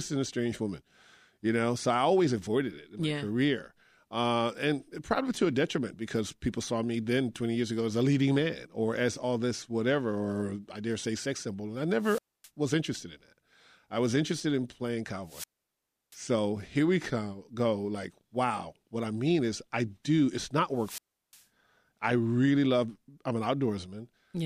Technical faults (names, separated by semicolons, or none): wireless microphone squelch dropout